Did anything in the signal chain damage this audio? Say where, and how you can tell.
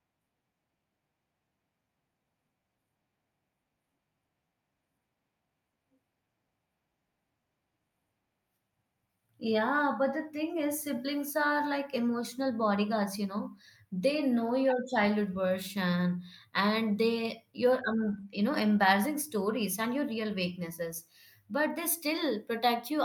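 No, nothing along the chain has audibly damaged this speech recording, and the signal holds steady and continuous with no stage leaving a mark on it.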